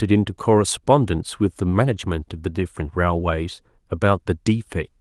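Nothing in this speech clip stands out as a technical fault, and the Opus voice compression it goes through, running at 24 kbps in hybrid mode, just does its usual job here.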